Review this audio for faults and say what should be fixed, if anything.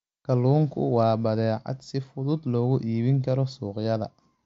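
No faults found; nothing needs fixing in this speech.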